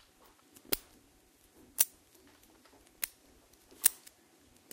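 At 1.81 s, a peak is driven about 18 dB past what the signal path can carry, and the stage hard clips it: the waveform tops are sliced flat, and that squared-off shape throws energy into high harmonics. The result is a brief, sharp crackle riding on the peak. The same hard clipping recurs at 3.86 s with about 21 dB of overdrive, producing a slightly harsher snap of distortion.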